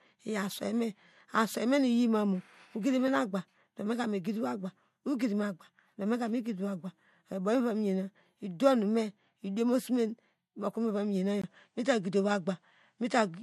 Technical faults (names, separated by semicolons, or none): input switched to a poorer device